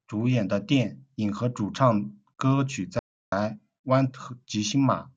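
An audio dropout to silence runs from 2.99 to 3.32 s in this speech recording, right after "主唱歌曲". For about 330 ms the signal falls to silence with no room tone, most likely because the input link briefly failed while recording continued writing silence.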